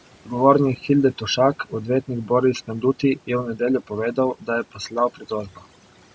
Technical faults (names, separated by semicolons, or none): overdone noise removal; speech cut by the noise suppressor